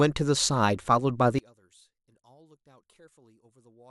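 At 1.39 s the speech drops by about 34 dB and stays down to the end, leaving only a faint residue. The likely cause is one channel inverted, so the shared centre content cancels when summed to mono. Unlike a dropout, a faint difference signal remains.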